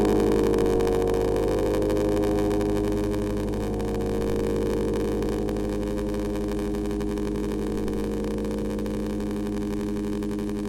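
From start to end, a block size mismatch (padded) leaves a short zero-filled gap at the end of every block. This puts a steady buzz at about 93.8 Hz under the sound, which fits 512-sample reads, and slows it to 0.861 times normal speed. Unlike a resampling mismatch, it keeps roughly the original pitch, and unlike underrun dropouts, the gaps are perfectly regular.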